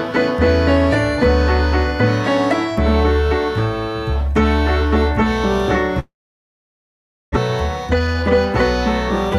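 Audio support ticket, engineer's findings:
Likely long network dropout: incoming stream stalled 5.99 to 7.38 s. Receiver stretched the last sound into a brief fading buzz, then about 1.2 s of silence. Resumes 7.38 s with roughly 1 s of audio gone; playback timing shifted around 0.3 s.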